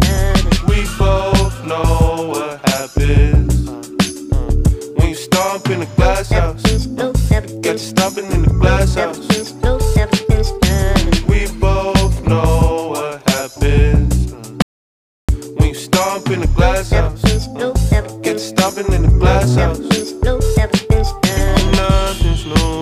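The input was likely lost while writing continued, giving an audio dropout to silence from 14.62 to 15.29 s: the sound cuts to total silence with no room tone.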